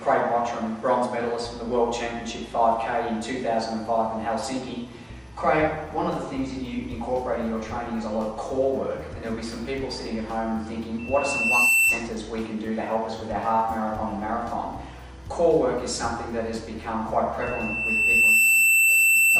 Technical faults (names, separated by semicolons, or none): loudspeaker feedback squeal